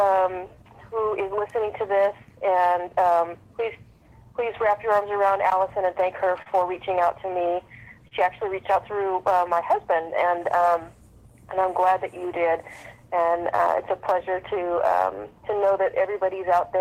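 The audio shows clock drift between sender and receiver throughout: the sender's clock runs roughly 3% slow, so the receiver's jitter buffer keeps draining and has to be topped up rather than trimmed. This appears as repeated timing corrections from 0.22 s to 16.78 s. The receiver inserts small repeated pieces, all in the same direction but unevenly spaced, so playback runs at about 97% speed and the clip gains about half a second overall, heard, if at all, as slight hiccups or an unsteady tempo. Two short stalls from a late packet, at 6.42–6.48 s and 8.08–8.13 s, are where the buffer ran empty. Each time the receiver held the last sound for 38 ms, causing a brief sustain, then resumed with nothing lost and the delay raised by 38 ms.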